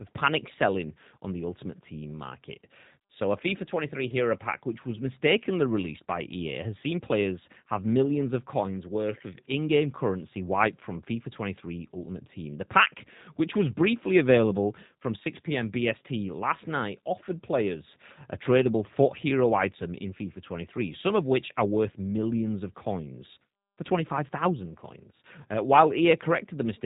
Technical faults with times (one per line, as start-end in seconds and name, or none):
0.00-26.86 G.729 codec